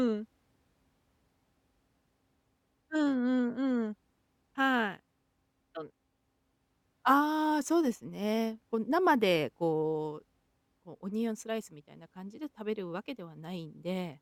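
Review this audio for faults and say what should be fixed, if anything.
No faults turn up in this audio, so nothing needs to be fixed.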